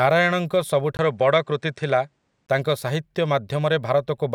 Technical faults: input switched to a poorer device

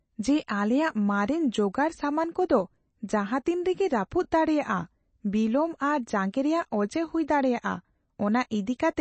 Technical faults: MP3 compression

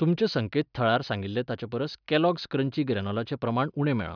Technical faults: none

